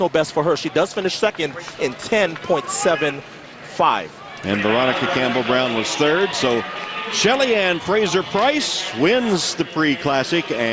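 No technical faults can be heard anywhere in this clip. The audio runs without any audible interruption or defect from its opening to its close.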